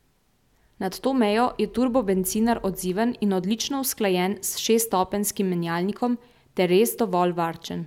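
No dropouts, clipping, glitches or other faults can be heard anywhere in this speech recording.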